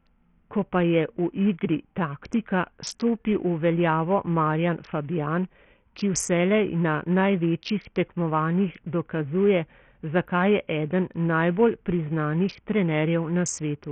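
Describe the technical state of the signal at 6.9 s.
At 6.9 s the speech is passing through what is likely Bluetooth SBC compression running heavily starved, as it is for the whole clip, consistent with a stream near 48 kbps. Top sub-bands get too few bits, so the treble flickers, grit and aliasing ride the speech, and nothing remains above 16.7 kHz.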